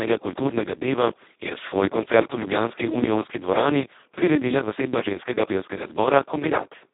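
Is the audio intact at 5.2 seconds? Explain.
No. At 5.2 s the speech sounds hoarse, buzzy and close to robotic, with a narrow, boxed-in tone and nothing at all above about 3.8 kHz. This is Speex codec damage, and it runs through the whole clip. The coder has almost no bits for the excitation signal, so it rebuilds the voice in a crude, vocoder-like way. The heavy roughness points to a setting near 2 kbps, squeezed into a line band of roughly 200 Hz to 3.7 kHz.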